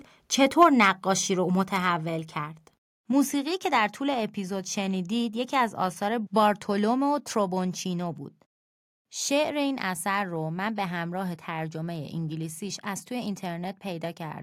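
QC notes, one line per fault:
0.61–0.88 s, microphone overload: loudest syllables get a harsh, crackly edge, likely from input running about 4 dB too hot, flattening a small fraction of peaks at the converter's ceiling.
0.63 s and 1.62 s, microphone volume stepped down: level drops suddenly by about 2 dB, then about 3 dB, voice and background together, likely the call software cutting input gain after those clipped peaks.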